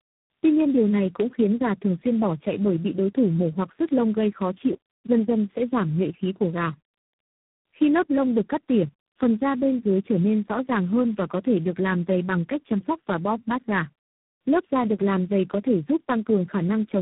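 From start to end, the speech shows tandem speech coding: it was decoded and re-encoded by about three low-rate speech coders in succession, which fits a chain like AMR-NB, G.729A and G.726. It sounds rough, muffled and warbly. A spectrogram shows nothing above 3.8 kHz and blurred, unsteady harmonics.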